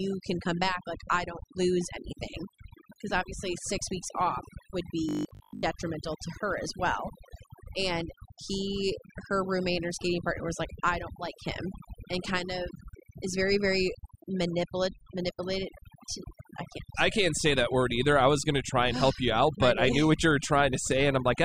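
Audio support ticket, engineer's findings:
Overdone noise removal, throughout: suppressor set too aggressively, gating individual bands near its noise estimate. Background collapses to near silence with twinkling specks; quiet speech detail is stripped.

Robotic sound from repeated short buffers, 5.09 to 5.63 s, between "six weeks off would" and "to her as well": rigid metallic 50 Hz buzz. Likely cause is a starved playback buffer looping the last 20 ms, with most of the real audio skipped.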